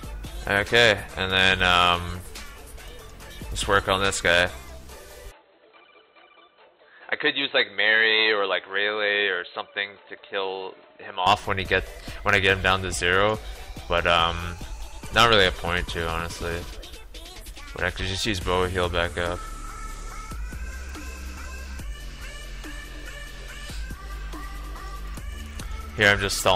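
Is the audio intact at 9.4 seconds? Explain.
No. From 5.31 s to 11.27 s the sound turns dull and boxy, with nothing above 4.1 kHz, drops a few decibels in level and carries a faint new noise floor, then clears at once. This is likely an input switched to a poorer device, a narrower-band microphone or headset call profile. Unlike a codec or filter cutting the treble, the change brings its own level, tone and background noise, and there is no gap at either switch.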